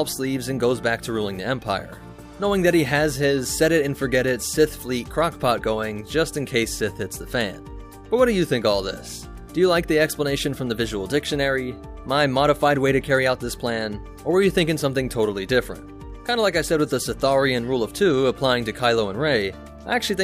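No technical faults are audible anywhere in the recording.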